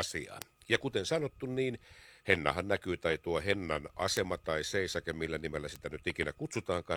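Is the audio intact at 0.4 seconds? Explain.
No. At about 0.42 s the speech is hit by a bit error spike: a single flipped bit throws the sample value off by a power of two for a sample or two, then it snaps straight back. The result is one sharp, broadband tick that bears no relation to the speech around it. Unlike a dropout click, nothing is missing or repeated, and unlike clipping it doesn't track loud passages.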